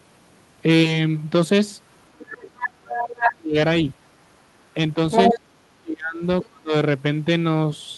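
From 2.09 to 3.56 s the speech sinks deeply, by roughly 35 dB. This is speech suppressed in double talk, likely an echo canceller ducking the talker while the far end also speaks. The waveform shows a gutted envelope. Inside that stretch, at 2.63–2.67, 2.97–3.04 and 3.22–3.32 s, the other side's voice leaks through in scraps. The scraps rise from somewhat quieter than the talker to about equal level, most likely residual loudspeaker echo the canceller missed. On the spectrogram they show as short harmonic smudges. A longer leak at 5.11–5.38 s, about as loud as the talker, runs into a second suppression from 5.34 to 6.23 s. A faint scrap at 6.42–6.46 s is followed by a brief, deep dropout from 6.47 to 6.73 s.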